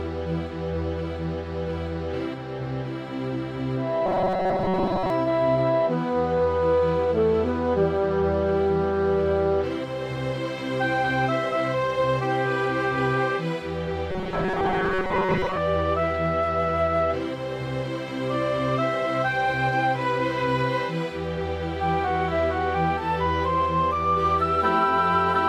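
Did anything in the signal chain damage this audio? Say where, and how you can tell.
Yes. From 4.06 to 5.10 s and again from 14.11 to 15.58 s the sound turns into a rigid, metallic buzz at 188 Hz that only loosely tracks the original. This is robotic sound from repeated short buffers, most likely at the driver or buffer stage. Audio arrived too slowly, so the same fragment of about 5.3 ms was replayed over and over, covering around 70 percent of each span, while the real audio in between was lost.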